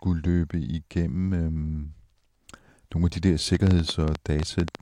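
This speech clip has a train of clicks from 3.55 to 4.76 s. About ten sharp ticks arrive unevenly, roughly nine per second, well above the speech. Interference from nearby equipment is the likely cause.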